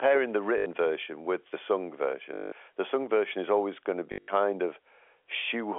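Packet loss with last packet repeated hits this telephone-band speech clip at 0.58 to 0.66 s before "version with the sung", 2.34 to 2.52 s between "version with the sung" and "the sung version is", and scattered across 4.12 to 4.28 s after "is always going to", with the longest run there about 80 ms. Each gap is filled by replaying the last packet, giving a robotic 50 Hz stutter that fits 20 ms packets.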